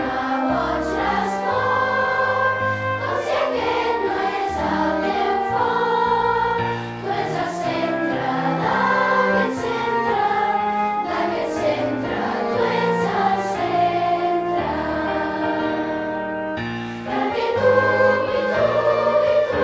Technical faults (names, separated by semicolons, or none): none